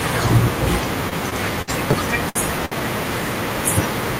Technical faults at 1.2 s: repeated packet loss (robotic sound)

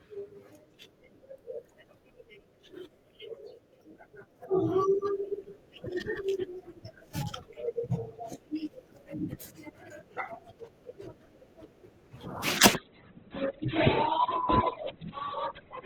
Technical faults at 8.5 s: none

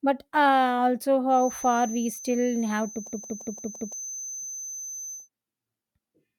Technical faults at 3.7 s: feedback whistle; system hang loop

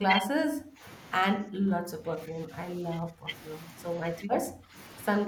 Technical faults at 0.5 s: speech suppressed in double talk

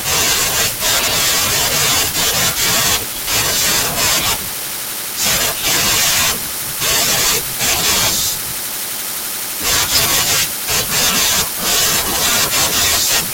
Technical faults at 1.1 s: frames out of order

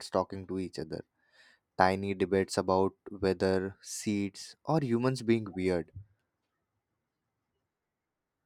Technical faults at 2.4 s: none

